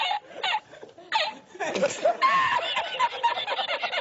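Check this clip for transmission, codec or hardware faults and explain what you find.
No faults turn up in this clip.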